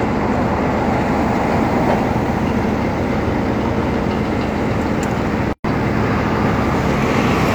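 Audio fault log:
5.53–5.64 s, gap at a join of encoded pieces: the sound drops out for about 118 ms with smeared edges, then resumes where it stopped. Two separately encoded sections were joined untrimmed, so the encoder's start-up delay and final-frame padding remain as silence.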